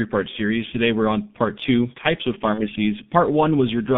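From start to finish the speech passes through a G.723.1 codec, with heavy codec damage. The line band runs from about 150 Hz to 3.5 kHz, so nothing above 3.5 kHz survives and the low end is thinned. The coarse, slowly updated vocal-tract model, consistent with the codec's roughly 6.3 kbit/s mode, leaves the speech muffled and hoarse, with consonants smeared together rather than crisply articulated.

At 2.54 s, right after "part two types of", there is VoIP packet loss concealed by the speech codec, lasting until about 2.68 s. The gap itself fits a single lost 30 ms frame. The decoder fills it by extrapolating from the last pitch period and filter state at reduced gain, which briefly stretches the sound. Because each frame is predicted from the previous one, the speech stays weakened or distorted for roughly another 100 ms before it recovers.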